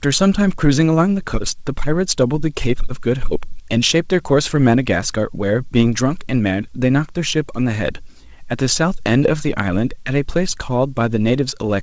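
No technical faults can be heard anywhere in the recording. It came over a working WebRTC call path whose codec leaves nothing above 8 kHz, a band limit and coding character that fit G.722 at 64 kbps.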